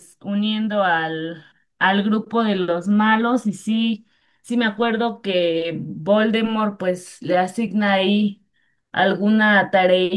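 Speech recording, no faults heard.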